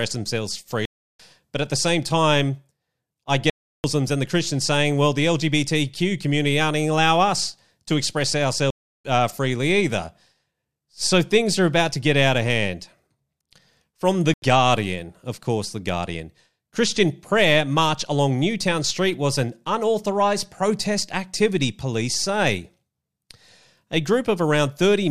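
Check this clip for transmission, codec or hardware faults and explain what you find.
The clip has four blocks of digital silence in the speech. They fall at 0.85 to 1.20 s, at 3.50 to 3.84 s (just before "and the"), at 8.70 to 9.05 s (between "allowing us to express" and "uh freely either"), and at 14.34 to 14.42 s. The first three each last about 0.34 s, which fits a 16384-sample block. The last lasts about 0.09 s, which fits a 4096-sample block. Each time, the output was filled with zeros, so the sound cuts abruptly and leaves a short hole.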